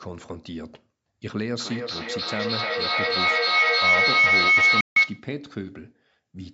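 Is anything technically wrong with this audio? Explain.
Yes, there are two faults. From 1.59 s to 5.34 s a piercing tone near 2 kHz swells until it sits about 13 dB above the speech, with the loop repeating roughly every 300 ms. This is feedback howl: a second device in the room re-captures the loudspeaker, and each trip around the loop adds gain.

From 4.81 s to 4.98 s the output falls silent for 154 ms, and the speech resumes further along, as though it kept playing underneath. This is likely a Bluetooth dropout, where packets reached the headphones too late and were discarded.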